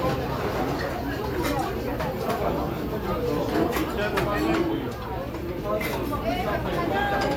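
No technical faults can be heard in this recording.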